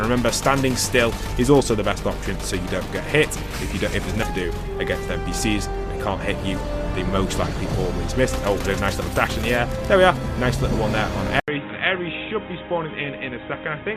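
At 11.40 s the sound stops for 80 ms, then returns duller and quieter until the end. Nothing passes above 3.8 kHz, with a new noise floor. The input likely switched to a poorer device.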